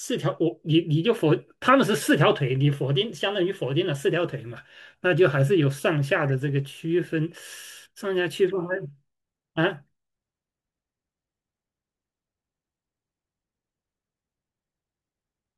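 No technical faults are audible.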